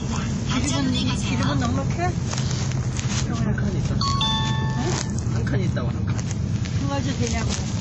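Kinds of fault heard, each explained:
WMA compression: The audio is dull and washy, with nothing above 9.7 kHz and a ringing smear around transients, likely from a block transform codec whose quantisation noise spreads over tens of milliseconds, consistent with an early WMA encoder at about 32 kbps.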